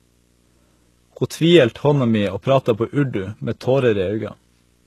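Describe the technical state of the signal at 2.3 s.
At 2.3 s, video or display buzz runs under the speech, as it does throughout. A screen or video cable couples a 60 Hz field-rate buzz, with hash above it, roughly 40 dB down.

The speech also has nothing above 12.3 kHz, throughout the clip. This is likely low-bitrate audio saved at a high bitrate: the high-rate MP3 keeps the earlier encoding's cut-off and artefacts.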